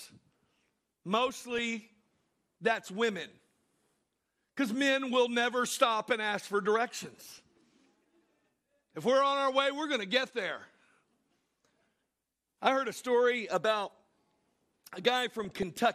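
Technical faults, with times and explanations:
throughout: MP2 compression. Likely low-rate MPEG Layer II coding, fitting about 80 kbps, switches off and coarsely quantises upper sub-bands, leaving the speech dull, gurgling and granular.
1.28–1.59 s, 7.24–7.58 s, 15.30–15.63 s: DAB burbling. Bit errors of a fraction of a percent slip past error correction, corrupting sub-band data across many frames, producing short blips of noise in single sub-bands.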